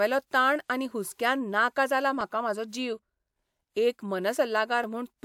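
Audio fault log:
0.89–4.84 s, clock drift buffer slips: a regular click recurs every 1.31 s, about four times, while speech plays. Likely two devices on separate clocks, a few hundred ppm apart, letting the buffer drift until a small block of samples is dropped or repeated.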